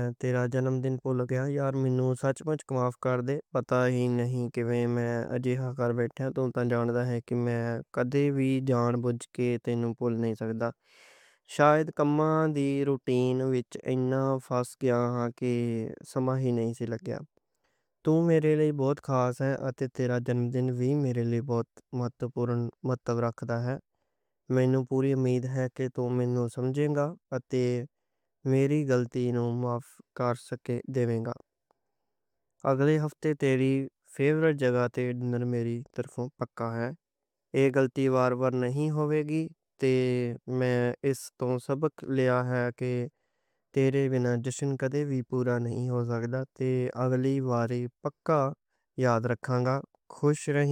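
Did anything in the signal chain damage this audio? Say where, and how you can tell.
No, no signal-chain damage heard.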